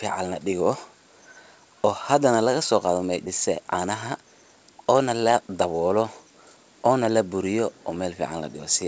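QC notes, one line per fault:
3.26–3.28 s, skip ahead: right after "hadana laga so qaathoh" playback leaps forward, with roughly a second of speech discarded and the two edges butted together with no fill. This happens when a jitter buffer overflows and drops queued audio to catch up. The waveform shows an abrupt splice with no silent gap, and the spectrogram shows a hard vertical seam where formant tracks break off and resume mid-pattern. Above 8 kHz it is empty, as throughout, which fits a wideband call codec.
3.51–7.21 s, jitter buffer speed-up: over these nearly four seconds the speech runs at about 111% of normal rate with the pitch unchanged, so it sounds hurried. The buffer held more delay than it aimed for, and the receiver trimmed it by repeatedly cutting out single or few pitch periods, about 0.4 s in total. The waveform shows compressed syllable spacing and slightly shortened voiced segments. 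On the spectrogram, harmonic spacing stays the same while events arrive closer together.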